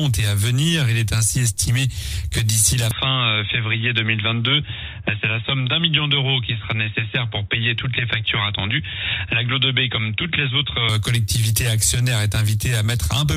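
At 2.91 s the sound turns dull and boxy, with no gap at the change. Nothing above 3.8 kHz remains, faint new background noise appears, and the level holds steady. It clears at 10.89 s. The likely cause is input switched to a poorer device.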